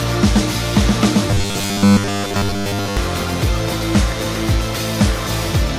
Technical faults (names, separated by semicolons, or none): robotic sound from repeated short buffers